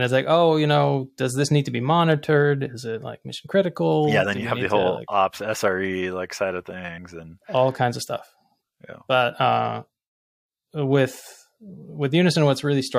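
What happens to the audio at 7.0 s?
At 6.97 s the speech lurches forward, as if a sliver of sound had been snipped out. About 50 ms of audio goes missing. These are compressed frames skipped: a couple of whole frames were never played, either absent from the file or rejected by the decoder as damaged. The jump size fits frames of 23.2 ms.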